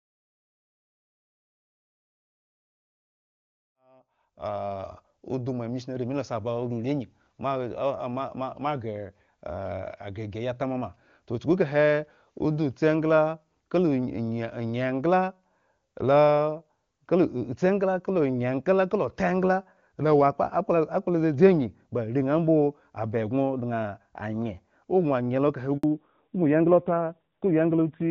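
At 25.77 s the speech drops out in a handover gap: the call is being passed from one network to another, and for about 60 ms no speech frames get through. The sound dies away quickly and leaves a short silence until the new link picks up, and whatever was said in that moment is lost. On a waveform this is a brief flat stretch. On a spectrogram it is a thin vertical blank band across all frequencies.

From 25.83 s to the end, the audio shows a fallback to narrowband. After the handover the call no longer carries HD Voice and continues on an older narrowband codec. The earlier wideband sound, with energy reaching up towards 7 kHz, gives way to a duller, boxier and rougher tone, which points to a low narrowband rate. On a spectrogram the upper content ends abruptly at a hard ceiling of 4 kHz, and the region above it stays empty for the rest of the clip.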